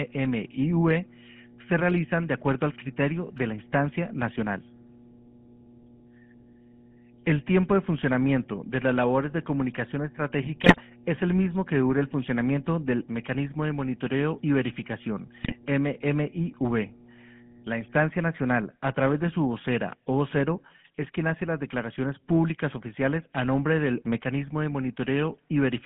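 Right through, the speech carries GSM full-rate codec damage. The band sits at about 150 Hz to 3.4 kHz with a plainly audible buzzy, gravelly roughness that fits the 13 kbps full-rate coder. At 10.62 to 10.80 s and again at 15.42 to 15.56 s, GSM bit errors hit. Corrupted decoder values bend the spectrum or spike the level, so the speech breaks into squawks, pops and gargling.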